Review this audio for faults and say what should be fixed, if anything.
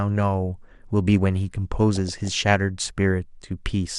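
Likely MP2 compression at a low rate, consistent with about 80 kbps, is starving the 32 sub-bands of bits. The upper bands drop out and the remaining ones are coarsely quantised, so the speech sounds dull throughout with a gurgling, granular edge. Encode at a higher bitrate, or use a more efficient codec, to prevent this.

DAB burbling runs from 1.96 to 2.33 s. Bit errors get past the error correction into the MP2 data and corrupt samples and scale factors. Single sub-bands then get short blips of noise or jump in level for up to a frame, giving burbling blips over the speech. Improve reception or antenna placement so that fewer errors reach the decoder.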